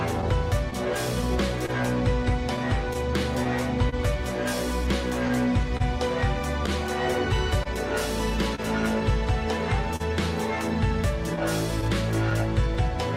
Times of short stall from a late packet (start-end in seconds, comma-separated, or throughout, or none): 9.96-10.02